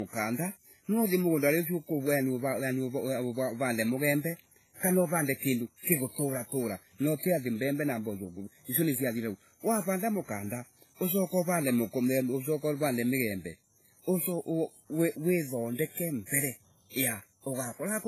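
Speech, carrying a layered codec sound throughout: nothing is present above 14.9 kHz, and two distinct kinds of smearing and swirl sit on top of each other. This is likely transcoding between lossy codecs, consistent with a low-rate WMA encode later re-encoded as HE-AAC at a similarly low rate.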